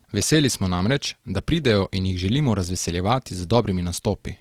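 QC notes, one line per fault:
Throughout, Opus compression: the speech has a rough, grainy texture, with voiced sounds turning noisy rather than clean. This likely comes from Opus in its music mode, starved of bits near 24 kbps, keeping each band's energy but refilling thin bands with noise or folded copies of lower ones. The bandwidth stays full. A spectrogram shows harmonics smeared into speckled noise with few empty holes, and the waveform looks largely unchanged.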